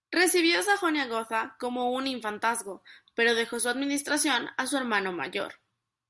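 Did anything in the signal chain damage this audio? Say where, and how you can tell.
No, nothing in this speech recording stood out as damage from any stage of the signal chain on listening.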